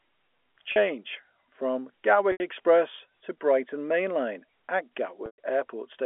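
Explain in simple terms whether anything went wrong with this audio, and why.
Something did go wrong. The speech has three short dropouts from packet loss with pitch repetition. Bits of the signal went missing in transit at 0.72 s (40 ms), 2.32 s (80 ms) and 5.26 s (120 ms). To cover each gap, the receiver replayed the last tiny cycle of the voice. The first gap is brief, so it sounds like a slightly held, buzzy sound. The longer two fade toward silence before the speech returns, all over the telephone-band sound of the line.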